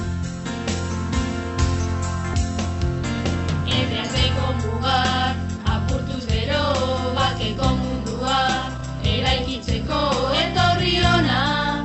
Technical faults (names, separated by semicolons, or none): skip ahead; jitter buffer speed-up